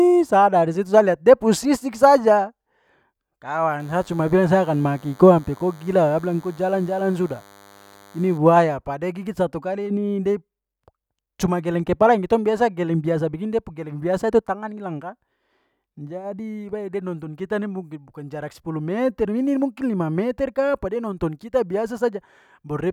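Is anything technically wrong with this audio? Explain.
Yes. From 3.80 to 8.37 s, DECT cordless phone buzz: radio bursts every 10 ms are rectified into a thin, faint 100 Hz buzz with many harmonics, harsher than smooth mains hum.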